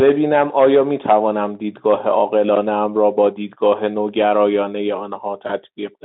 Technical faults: VoIP packet loss concealed by the speech codec

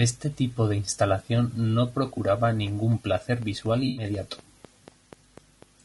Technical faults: low-delay AAC compression; train of clicks; AAC frame loss with concealment

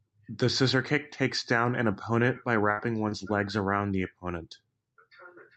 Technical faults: burst of packet loss; short concealed packet loss

